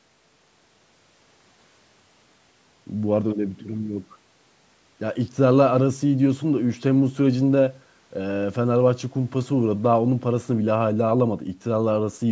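No technical faults can be heard in this speech recording.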